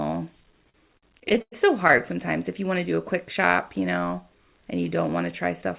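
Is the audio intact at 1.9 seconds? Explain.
No. At 1.9 seconds the audio sits inside a stretch of repeated stalls (stutter) running from 0.52 to 2.01 s. Packets arrived late, so the jitter buffer kept running dry, 17 times in that span. Each time, the receiver stretched the last sound to cover the wait, fading it over the longer waits of up to 99 ms. Nothing is lost, but about 326 ms of concealment, roughly a fifth of the span, makes the speech drag and stutter.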